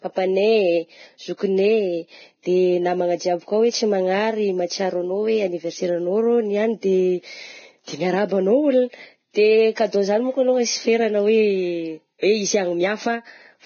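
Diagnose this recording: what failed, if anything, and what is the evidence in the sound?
The speech sounds hissy and grainy throughout, with nothing above 6.5 kHz, so consonants lose their sharp top and voiced sounds take on a rough texture. This points to the codec stage, most likely heavy Vorbis compression at a low rate, in keeping with something near 16 kbps. At that setting the encoder lowers its cut-off and quantises the remaining treble so coarsely that fine detail is replaced by noise of similar energy.

A brief smear of hiss arrives just before three sharp onsets: at 1.37 to 1.39 s, at 9.34 s, and at 12.19 to 12.23 s, where it stretches to about 42 ms. This is pre-echo, also from the codec. Each attack landed late in a transform block, so quantisation noise sized for the loud onset was spread across the whole block, filling the quiet gap ahead of it and leaving the attack itself softened.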